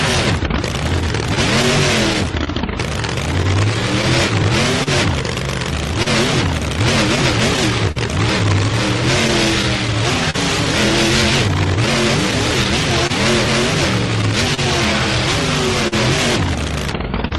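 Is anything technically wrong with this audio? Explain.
Yes. Two timing faults are audible.

Clock drift between sender and receiver runs through the whole clip. The sending side's clock seems to run roughly 3 percent slow. The receiver's buffer keeps draining as a result. It stretches or repeats small slices of sound to keep playing. You hear small, recurring timing hiccups at uneven intervals. The pace wobbles slightly rather than flowing evenly.

Scattered short gaps appear from 1.35 s to 17.33 s. There are around twenty of them, each brief, the longest near 40 ms. Late or lost packets left small holes. The receiver filled each one by extending the preceding sound, adding up to roughly 400 ms, or about 3 percent of that stretch. The result is brief ticks, smears and stutters sprinkled through the sound, against a background of ordinary call-codec coloration with highs capped near 12 kHz.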